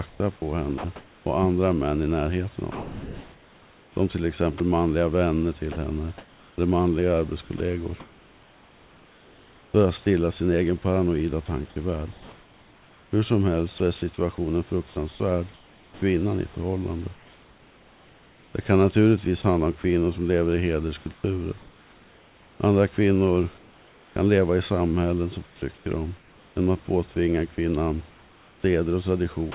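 From 0.08 to 1.26 s the speech is chopped by the voice detector. About 540 ms of quiet syllables and word edges drop into synthetic noise, likely because the sender's detector kept toggling transmission. The same choppy flicker returns from 2.72 to 7.6 s, losing about 1.8 s. From 12.12 to 16.02 s, ending just before "i förhållandet", about 1.72 s goes. A brief 40 ms cut falls between 19.42 and 19.84 s.

Right after "som lever i", from 21.14 to 21.24 s, comfort noise replaces the background. The sender likely paused transmission, and the receiver filled the gap with steady, featureless noise about 6 dB quieter than the real room. From 23.58 to 24.16 s the fill returns, about 3 dB quieter.

After "leva i samhällen som", from 25.46 to 29.54 s, chopping resumes and replaces about 1.26 s. Throughout, the call path's 4 kHz band limit dulls both the speech and the fill.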